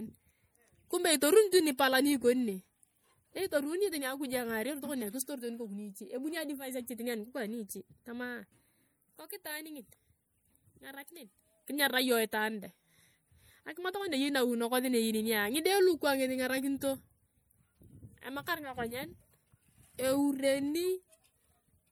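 Speech runs throughout with a plainly audible watery, swirling coarseness and nothing above about 20.9 kHz, likely MP3 compression at a bitrate that fits a 64 kbps encode. At 1.51 s and again at 1.77 s, brief hisses of about 13 and 16 ms smear in just ahead of sharp attacks. That pre-echo comes from the codec spreading quantisation noise across each block.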